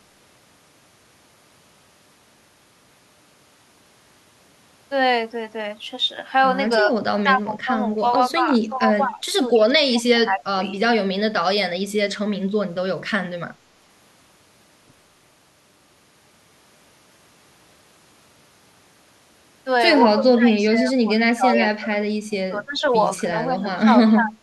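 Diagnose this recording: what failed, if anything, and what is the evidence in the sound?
Speech suppressed in double talk at 6.84–10.76 s, 20.14–22.83 s and 23.48–24.34 s: the speech dips in patches by about 15 to 25 dB. The likely cause is the echo canceller in call processing treating simultaneous far-end talk as echo and turning down the near-end talker with it.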